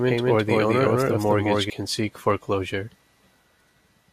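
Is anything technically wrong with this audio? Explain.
Yes, there are two faults. From the start of the clip until 1.7 s there is a doubled audio track. The speech is joined by a full-band copy about equally loud, trailing roughly a fifth of a second behind, most likely from a second, slower capture path. On a waveform every syllable repeats as a clean twin with no decay, and the echo stops abruptly at 1.7 s.

At 1.94 s there is a brief burst of DAB burbling. A small fraction of bit errors slipped past error correction into the MP2 data, so wrong samples put short blips of noise into individual sub-bands. It sounds like a short blip of noise, and a spectrogram shows isolated short specks in single sub-bands.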